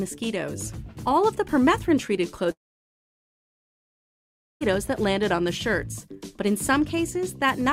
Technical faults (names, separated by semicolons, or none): long network dropout